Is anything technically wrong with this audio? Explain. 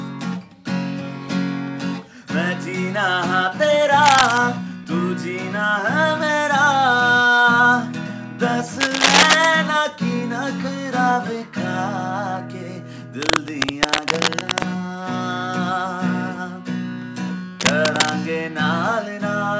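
Yes, there's cable scratch noise four times: 4.02 to 4.38 s, 8.80 to 9.46 s, 13.22 to 14.64 s, and 17.60 to 18.10 s. Bursts of dense, ragged scratching sit roughly at the sound's level, a little louder at 8.8 and 17.6 s, likely from a worn cable or connector shifting and its contact resistance jumping around. The call-codec path, with nothing above 8 kHz, isn't the problem.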